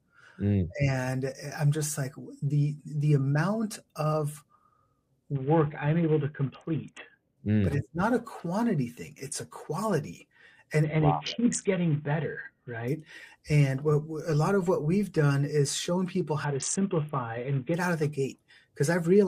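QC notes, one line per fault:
5.35–7.37 s, 10.84–12.88 s and 16.44–17.74 s, Bluetooth SBC bit pool drop: the link gets squeezed three times and the encoder starves its upper sub-bands, so the top end goes dull and gritty grain creeps in. It sounds like the bit pool falling from about 28 to 5, near 54 kbps, before recovering.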